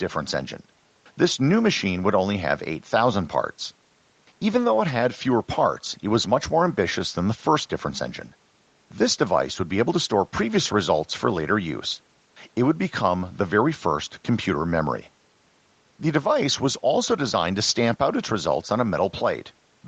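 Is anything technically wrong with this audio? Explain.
No, nothing is wrong: the speech shows the usual behaviour of a call microphone chain and a WebRTC call path, with nothing above about 8 kHz, consistent with a wideband Opus link at around 32 kbps.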